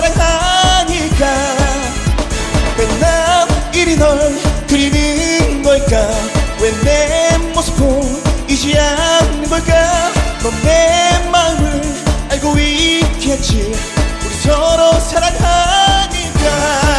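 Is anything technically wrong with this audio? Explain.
No, no technical faults.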